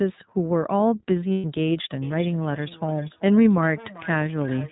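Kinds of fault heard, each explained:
iLBC codec: The speech is squeezed into narrowband and nothing passes above 4 kHz, with a rough, slightly synthetic edge that fits iLBC's 20 ms frame mode at about 15.2 kbps. Unlike a plain low-pass filter, the damage is to the voice's texture, not just lost treble.
Lost iLBC frames: From 1.33 to 1.45 s, a gap of about 120 ms, which points to six lost frames, is filled by a held, faintly buzzy vowel built from a repeated pitch cycle. Unlike a dropout to silence, the gap is papered over, and the voice recovers at once.
Feedback echo between two devices: From 2.02 s to the end, the speech returns at a steady interval of roughly 0.4 s, thinner and more ringing each pass and peaking about 19 dB below the direct voice. Unlike room reverberation, each repeat is a distinct delayed copy.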